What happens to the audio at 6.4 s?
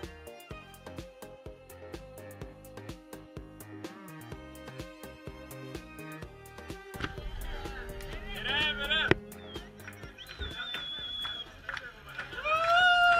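Nothing goes wrong at 6.4 s; the audio runs through that moment without any dropout, glitch or distortion.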